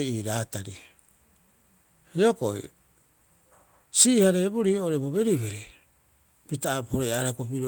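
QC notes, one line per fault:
Nothing to flag on this speech recording, as no faults turned up anywhere in it.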